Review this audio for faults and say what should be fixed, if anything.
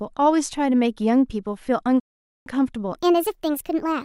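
A rebuffering stall runs from 2.00 to 2.46 s: playback starves, falls silent, then resumes exactly where it stopped, adding 0.46 s without losing any speech, unlike a dropout. A larger playback buffer or a lower streaming bitrate would prevent it.

From 2.96 s to the end, a section at the wrong speed plays 1.39 times fast, raising pitch about five semitones together, likely from a clock mismatch, not a pitch shift alone. Resampling that section against the correct clock would fix it.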